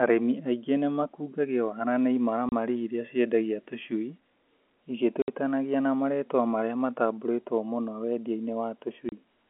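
Speech heard over a telephone-band line, with the band stopping near 3.4 kHz. Three hard gaps of silence cut into it. They fall at 2.49 to 2.52 s, 5.22 to 5.28 s and 9.09 to 9.12 s. Each edge is abrupt. The holes last 30, 60 and 30 ms, which fits one, two and one lost 30 ms packets. This is packet loss filled with silence. The receiver played nothing where audio went missing.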